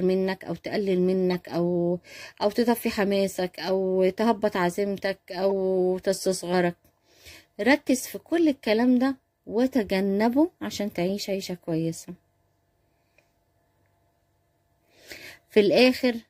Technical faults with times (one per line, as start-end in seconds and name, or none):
1.30-1.34 corrupt frame decoded
5.49-5.52 corrupt frame decoded